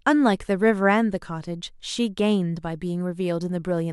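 Nothing stood out as a technical fault on listening to the recording.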